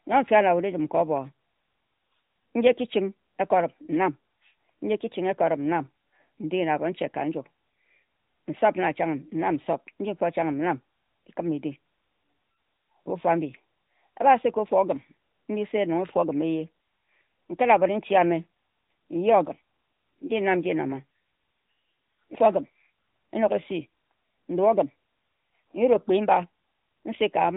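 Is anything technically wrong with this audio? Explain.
Yes. Throughout, the speech carries plainly audible AMR narrowband mobile codec damage. A spectrogram shows a hard ceiling near 3.8 kHz with nothing above it. Sibilants sound dull, and vowels have a buzzy, synthetic edge that fits a mid-rate AMR-NB mode near 10 kbps.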